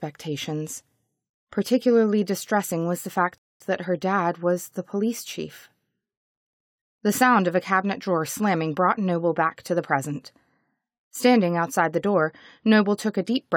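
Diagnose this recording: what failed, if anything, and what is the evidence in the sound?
A rebuffering stall at the network-to-playback stage. The sound drops to silence at 3.38 s and picks up again at 3.60 s, exactly where it left off. The player's buffer ran dry, and it waited for more data. Nothing is lost, but about 225 ms is added.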